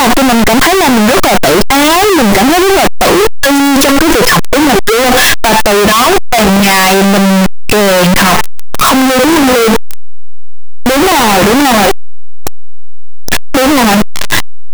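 Signed and unsigned mixed up, from start to finish of this speech clip: the audio is a constant, very loud, harsh distortion, with soft syllables blasting as hard as the rest. The likely cause is 8-bit samples read with the wrong sign convention, so the top bit is flipped and every zero crossing leaps across the full range.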